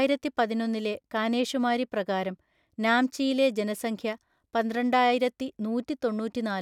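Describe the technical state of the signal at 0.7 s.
At 0.7 s the speech signal is intact, with no dropout, distortion, clicks or other technical fault audible at that point.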